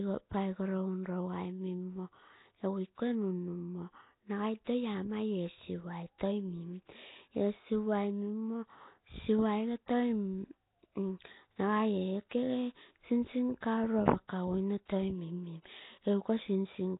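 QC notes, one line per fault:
Throughout: Nellymoser compression, likely from a Nellymoser Asao codec near 16 kbps, starving weak bands of bits and noise-filling them, so speech sounds rough, hissy and underwater, with nothing above 3.8 kHz.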